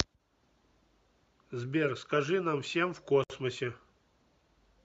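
Around 3.24 s the speech just drops out for roughly 63 ms, until about 3.30 s. That's a gap at a join of encoded pieces: the audio was encoded in separate chunks and stitched together without trimming, so the encoder's start-up silence and the padding on the previous chunk's last frame both stay in. You hear a sudden hole with softened edges, then the speech picks up exactly where it left off.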